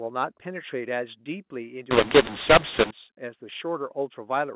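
A mu-law and A-law mix-up runs from 1.91 to 2.91 s. For that second, speech coded with the mu-law companding curve is decoded as though it were A-law, so each 8-bit code maps to the wrong level on the wrong logarithmic scale. Some samples come out too loud and others too soft, and near-silent samples jump well above zero. The speech turns harsh and gritty, and the gaps fill with noise, against the narrow telephone band of the 8 kHz mu-law line.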